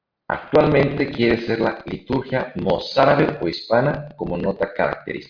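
Nothing in the recording points to a technical problem: the speech signal carries on steadily without any audible disruption.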